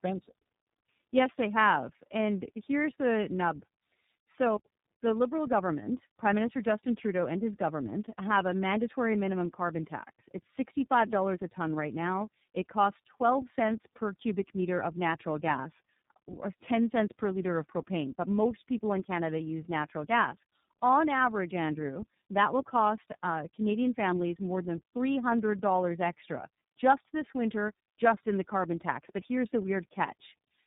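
Tandem speech coding runs through the whole clip: the speech sounds as though it crossed two low-rate speech codecs in a row, likely a G.729A leg and then an iLBC leg with a G.711 hop between them. At each border the signal was decoded and coded again, so the second coder had to model the first one's errors. The result is rough, muffled and warbly speech, with nothing above 3.7 kHz.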